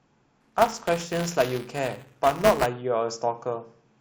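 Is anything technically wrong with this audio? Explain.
Yes. From 0.41 to 2.66 s the speech has buffer tearing. The program filling the ring buffer and the hardware reading it have drifted and now cross inside each period. A small slice of every buffer still holds audio from one lap earlier, roughly 10 ms old, joined hard on both sides. Those joins repeat at 200 Hz, which points to a buffer of about 5 ms. The result is a steady robotic buzz that rides on the speech.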